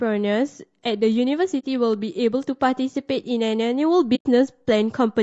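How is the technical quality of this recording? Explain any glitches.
The quality is held back by a coding artifact running the whole way through, plus two short dropouts.

Throughout the speech there's a rough, grainy quality, with a noisy haze sitting between the harmonics and a top end that sounds thin and somewhat synthetic. That's most likely low-delay AAC compression, the AAC-ELD flavour used in video calls, at a rate that fits roughly 32 kbps. At that rate the bits run out, so detail between the harmonics gets smeared into noise.

Then there are two holes from AAC frame loss with muting, one from 1.60 to 1.65 s and a longer one from 4.15 to 4.26 s. The sound simply drops to silence and comes back, with soft edges. The lengths fit two lost frames and then five. The decoder zeroed those frames, and the overlapping windows faded the audio out and back in.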